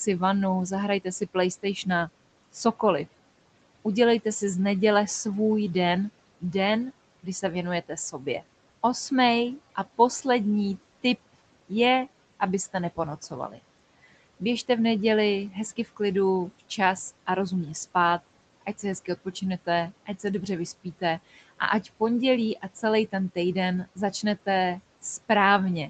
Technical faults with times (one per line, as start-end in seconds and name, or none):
1.04-2.80 speech cut by the noise suppressor
6.41-17.28 speech cut by the noise suppressor
18.66-24.47 speech cut by the noise suppressor